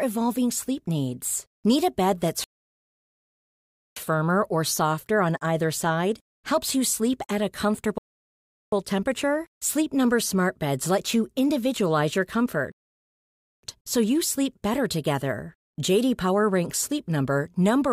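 Three rebuffering stalls interrupt the speech: at 2.44 s for 1.5 s before "firmer or softer on", at 7.98 s for 0.74 s after "you sleep at a", and at 12.72 s for 0.91 s between "let you individualize your" and "so you sleep better". Each time, playback ran dry and waited in silence. Unlike a dropout, each resumes exactly where it stopped, losing nothing and only adding time.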